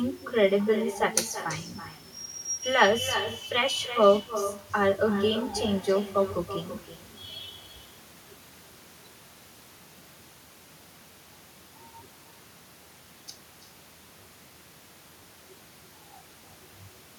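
Speech carrying an echo with no canceller throughout. The far loudspeaker's uncancelled pickup repeats everything about 11 dB down and roughly a third of a second late, a distinct copy unlike reverberant smear.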